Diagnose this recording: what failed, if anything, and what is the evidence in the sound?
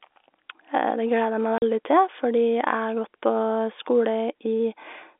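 Packet loss filled with silence at 1.58 s: a 40 ms hole drops out of the speech just before "til fordi", with hard edges at entry and exit. This is a network fault. The hole's length points to two consecutive 20 ms packets going missing, and rather than concealing the gap the receiver played silence in their place. The surrounding telephone-band sound, limited to about 300 Hz to 3.6 kHz by the G.711 line, continues unchanged on either side.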